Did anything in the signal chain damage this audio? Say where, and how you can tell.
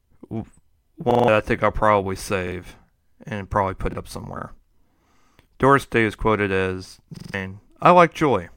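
Yes. The driver or playback buffer ran dry five times, and each time the device replayed its last block of audio, a repeated buffer. Each repeated slice lasts about 43 ms, which fits a 2048-sample buffer, and every repeat joins with a hard edge. At 1.11 s and 7.17 s the slice sounds five times in a row, a stutter of about 0.17 s that loses roughly 150 ms of speech. At 2.48, 3.93 and 5.21 s it plays twice, a brief hiccup losing about 40 ms.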